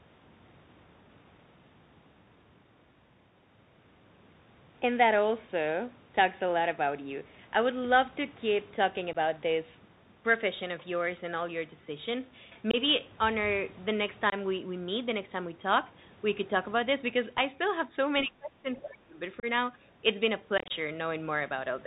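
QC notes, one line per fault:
throughout: Bluetooth CVSD headset codec. The 64 kbit/s one-bit delta modulator sends only an up or down step per sample, so nothing above 4 kHz survives. Loud bright moments outrun the adapting step and distort, s sounds turn scratchy, and a grainy hiss sits underneath.
9.13–9.16 s, 12.71–12.76 s, 14.30–14.34 s and 19.40–19.45 s: unconcealed Bluetooth headset packet loss. Gaps of 15, 22.5, 22.5 and 30 ms, consistent with two to four lost headset packets, are filled with silence or an idle pattern rather than patched. The edges are abrupt, and the CVSD decoder resumes quieter for a moment.
20.58–20.71 s: unconcealed Bluetooth headset packet loss, scattered. About 82.5 ms goes missing across 120 ms in short holes, the longest 22.5 ms, which points to roughly ten packets dropped. The rapid on-off chopping makes the speech sound rough and crackly.
18.24–18.67 s and 18.83–19.20 s: speech suppressed in double talk. 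The level dips by around 20 dB, then around 30 dB, for roughly 400 ms each time. The likely cause is an echo canceller that could not tell the talker from loudspeaker echo and attenuated both.
18.75–18.84 s: other side's voice leaking through. A faint second voice, roughly 20 dB below the speech, slips in between the two suppressed stretches. This is likely residual loudspeaker echo that the canceller failed to remove from the microphone signal.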